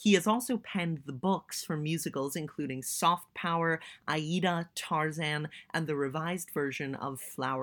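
No technical faults can be heard anywhere in the speech recording; the signal stays continuous and stable throughout.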